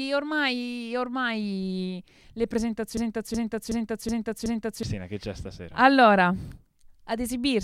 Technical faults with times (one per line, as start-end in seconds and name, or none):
2.97-4.83 system hang loop